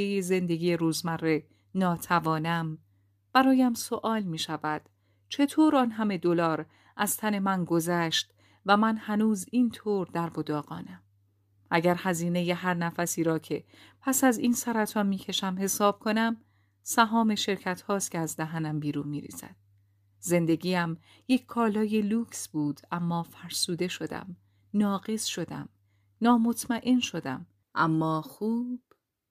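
Listening through the recording, nothing stood out as a technical problem at any point.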